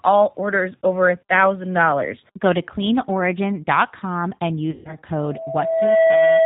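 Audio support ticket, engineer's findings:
G.729 codec throughout: band stops at 4 kHz, speech rough and slightly synthetic, plainly audible coding damage. Points to G.729A at 8 kbit/s, a filter-plus-pulse model. Unlike a plain telephone band-limit, which stays clean within its band, this adds a gritty, buzzy texture inside the passband.

Packet loss concealed by the speech codec, 4.71 to 4.97 s: about 140 ms of audio missing, which fits seven lost 20 ms packets. The decoder repeats the last pitch and filter, so the sound smears into a fading buzzy tone or coloured noise instead of a silent gap or click. Speech stays weak and distorted for a while after packets resume.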